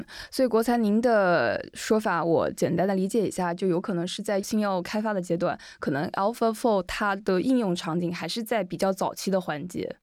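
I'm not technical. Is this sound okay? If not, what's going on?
Yes, there's nothing wrong with this recording.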